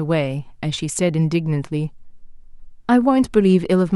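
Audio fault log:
0.75 to 0.78 s, AAC frame loss with concealment: a short run of coded frames never reached the decoder, and the gap, about 20 ms of audio and consistent with two frames of a low-delay AAC stream (likely AAC-ELD), was patched by reusing the last good spectrum rather than decoded fresh. The speech therefore turns briefly smeared and noisy, a phasey blur in place of clear detail, before normal decoding resumes.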